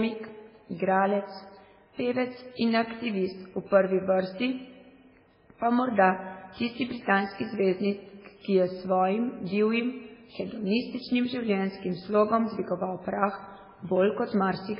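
Speech runs the whole clip with heavy MP3 compression damage throughout. Nothing is heard above about 5.3 kHz, so the top end is sharply cut off. The voice sounds watery and swirly. S sounds come out as metallic chirps, and consonant onsets are smeared. The likely cause is an MP3 encoder starved of bits, which fits a rate near 16 kbps. It drops the treble at a fixed point and lets weak frequency components flicker on and off between frames.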